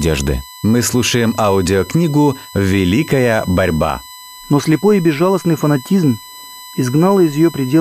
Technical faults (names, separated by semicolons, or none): USB whine